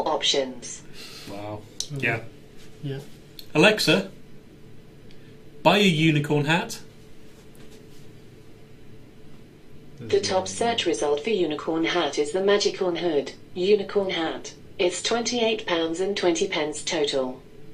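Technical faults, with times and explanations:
Nothing technical jumps out here; there's nothing to flag at any point in the audio.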